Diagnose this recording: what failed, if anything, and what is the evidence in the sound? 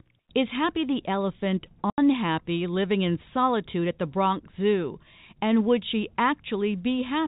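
The network dropped packets, and the receiver filled the gap with silence. Just after "the elephant", an 80 ms hole runs from 1.9 to 1.98 s, which fits four 20 ms packets replaced by zeros. The waveform falls to a flat line with hard edges, and the spectrogram shows a blank vertical band.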